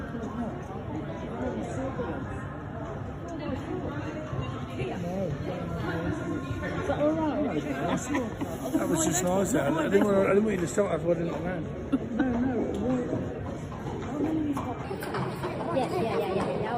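The audio has a section at the wrong speed. From 14.84 s to the end of the clip, playback runs 1.35 times faster than it should. Pitch rises with it, by roughly five semitones. The change is abrupt. Everything in that final stretch sounds higher and more hurried than what came before. Because speed and pitch shift together, this is likely a resampling or clock mismatch, with that last portion played back against the wrong rate.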